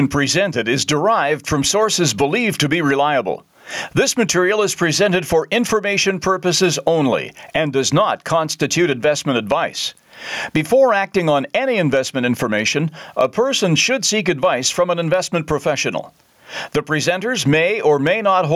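Gain pumping runs through the whole recording: the level is pulled down under each loud syllable, with a swing of roughly 20 dB, so loud and soft parts end up closer in level and the sound is squashed. The likely cause is input gain set far too high, with a fast limiter clamping every peak. On the waveform the speech envelope looks flattened.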